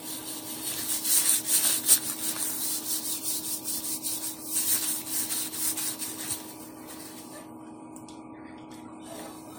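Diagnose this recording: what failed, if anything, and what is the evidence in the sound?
The codec stage failed, most likely through generation loss: repeated lossy re-encoding, consistent with around ten passes through AAC at 96 kbit/s. Each pass requantised on a shifted frame grid, so throughout the clip the sound is swirly, smeared and hollow, with blurred attacks.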